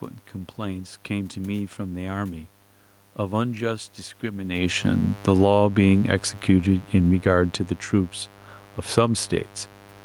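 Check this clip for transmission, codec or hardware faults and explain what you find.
There are three hardware-side problems in this speech clip: a constant mains buzz and two overlapping automatic gain control swings in the middle.

Mains buzz runs the whole length. It's a steady, raspy buzz sitting roughly 25 dB below the speech. It's built on a 50 Hz fundamental, but the rasp comes from its harmonics stacking up well into the kilohertz range. That points to sharp switching spikes, twice per mains cycle, getting into the signal path from something like a dimmer, a rectifier or a missing shield.

Automatic gain falling covers 4.51 to 8.25 s. The gain control decided the input was too hot, or its background noise too strong, and eased its gain down by about 7 dB over nearly four seconds. You hear the speech and the room noise behind it sinking together, which separates it from a change at the source. 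The talker also shifts position at the microphone around 4.5 s, right as this starts, so the level change at the onset has two causes.

Automatic gain rising sits inside that stretch, from 5.52 to 6.19 s. Here the control briefly judged the input too quiet and pushed the gain back up by about 7 dB in roughly two thirds of a second. Voice and background swell together, so you get a short lift in the middle of the downward drift. It sounds like the AGC hunting.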